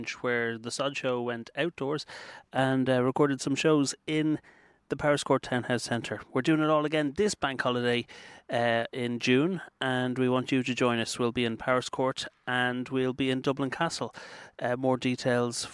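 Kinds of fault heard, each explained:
Nothing here calls for a fix; the audio just carries on as it should, with no dropouts, glitches or distortion anywhere along the way.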